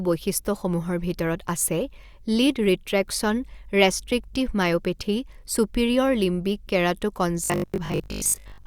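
Robotic sound from repeated short buffers fills 7.44 to 8.66 s of this speech clip, turning the voice into a rigid, metallic 50 Hz buzz that loosely follows the speech. Audio likely arrives too seldom, so playback loops 20 ms chunks and skips most of the real signal.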